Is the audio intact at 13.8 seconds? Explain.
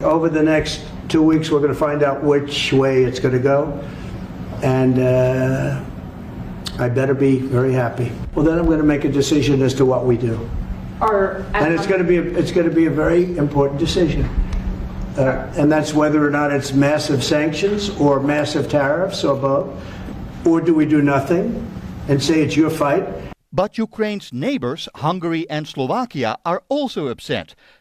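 No. Clock drift buffer slips run from 0.11 to 26.90 s: regular clicks every 1.22 s, likely from two mismatched device clocks forcing a few samples to drop or repeat.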